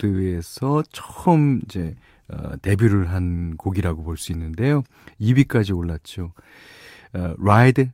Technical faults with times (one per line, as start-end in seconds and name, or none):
none